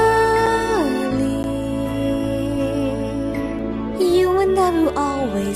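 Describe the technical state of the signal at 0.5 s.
A tick or dip sits just before that point, at 0.46 s: a block of digital silence about 5 ms long. The signal drops straight to zero and returns with no fade, so each edge produces an abrupt step, and the gap is too short to hear as a hole, so it comes across as a tick or dip. The likely cause is the program failing to fill its output buffer in time, leaving those samples as zeros.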